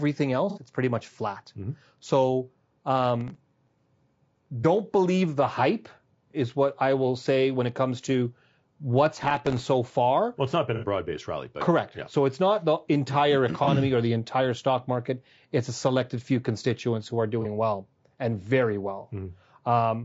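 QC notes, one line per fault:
throughout, low-delay AAC compression: rough, grainy speech with noise between harmonics, likely AAC-ELD near 32 kbps; spectrogram shows smeared harmonics and a patchy, synthetic top band.
0.50–0.59, 4.61–4.65, 10.76–10.84, 13.64–13.69, 17.42–17.46, AAC frame loss with concealment: 30 or 60 ms gaps filled from the last good spectrum, so a brief smeared, noisy patch. The first falls before "it's pretty much flat", one between "it's not the entire" and "or the entire stock", and the last between "few constituents who are" and "well and very". On the spectrogram each shows blurred harmonics.
3.21–3.68 and 9.06–9.68, processor overload crackle: short dropouts of roughly 1.5 ms each, about ten and thirty missed buffers respectively, give gritty tearing. The waveform shows hard-edged notches and the spectrogram vertical broadband streaks.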